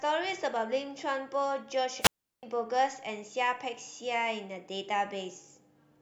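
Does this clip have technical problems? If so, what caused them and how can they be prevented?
Yes. A wireless microphone squelch dropout occurs from 2.00 to 2.43 s, leaving a hole of near silence about 360 ms long in the speech. The analogue FM radio link between the transmitter and its receiver weakened until the received carrier fell below the receiver's squelch threshold, at which point the receiver muted its output rather than pass on raw static. Once the signal recovered, the squelch reopened and the speech resumed. To prevent it, keep clear line of sight between transmitter and receiver antennas, use diversity receivers, check fresh batteries, and pick frequencies clear of interference.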